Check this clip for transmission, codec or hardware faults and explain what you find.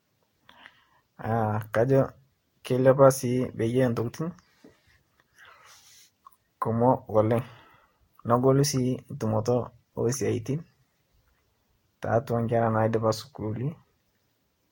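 The speech shows one codec fault, present for the whole clip: generation loss. Its likely cause is repeated lossy encoding, several passes through a Vorbis-type codec, each decoding and re-encoding on a shifted frame grid so quantisation noise and spectral holes pile up. Nothing remains above 16.7 kHz, and the sound is swirly, hollow and smeared, with blurred consonant attacks. A single encode near 60 kbit/s, which the bandwidth suggests, would not sound this degraded.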